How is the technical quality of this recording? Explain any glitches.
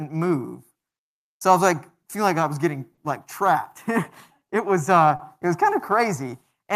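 The speech has an unsteady, slightly dragging timing with two brief held moments, along with a mismatch between the sender's and receiver's clocks.

Clock drift between sender and receiver runs through the whole clip. The sender's clock is running a few percent slow, around 3 percent behind the receiver's. The receiver consumes audio faster than it arrives, so its jitter buffer keeps draining. That steady shortfall drives the repeated timing corrections heard here.

Repeated timing corrections run from 0.78 s to 6.64 s. The pacing sounds faintly uneven and a touch slow, with small hiccups at irregular spacing rather than one obvious break. To keep the draining buffer from running dry, the receiver keeps repeating short slivers of audio, always in the same direction. Playback runs at about 98 percent of normal speed, adding roughly a tenth of a second over that stretch.

There are two short stalls from a late packet, at 2.94 to 2.99 s and at 5.16 to 5.21 s. 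In each, a sound is held a moment too long, with a slight buzzy or dipped quality. Here the buffer did run empty. The receiver stretched the last audio by 30 ms until the late packet arrived, then carried on from the same point. Nothing is lost, but playback delay grows by 30 ms each time.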